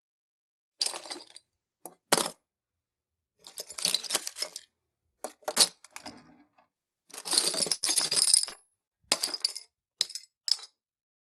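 From 7.73 s to 8.92 s the audio suffers repeated packet loss, giving a robotic sound. Eight separate gaps fall inside that 1.2 s span, the longest about 91 ms, and roughly a quarter of the stretch is concealed rather than received. Each hole is bridged by extending the preceding sound, so the result is choppy and robotic, with short pieces dropped. The band-limited top end, with nothing above about 12 kHz, points to an Opus call path.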